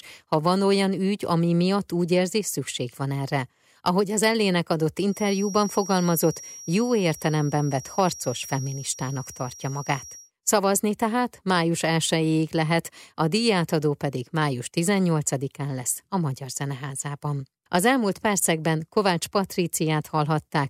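From 5.05 s to 10.32 s a feedback whistle sits behind the speech: a thin, steady tone at 5.7 kHz, around 20 dB below the voice, swelling and fading slowly in level. The likely cause is a loudspeaker-to-microphone loop running just at the edge of instability, where gain at that one frequency is high enough to sustain a tone but not to make it grow. It stops at 10.32 s.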